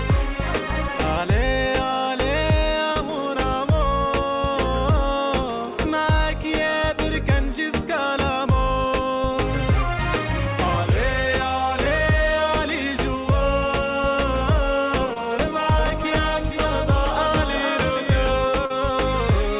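At 2.92 to 2.97 s the sound briefly smears and wobbles, and the same happens at 15.13 to 15.18 s and 18.66 to 18.72 s. This is short concealed packet loss: roughly 40 ms, 20 ms and 40 ms of audio arrived too late to decode, and the receiver bridged each gap by extending the preceding sound for about 34, 22 and 39 ms before blending back into the real signal.

From 15.79 to 18.51 s a second, full-band copy of the audio trails the first by roughly half a second, about 5 dB quieter. It has no room colour and starts and stops abruptly. This doubled audio track is likely the same signal being captured again through a slower path. The whole clip has nothing above 4 kHz, as expected from the G.711 A-law call codec.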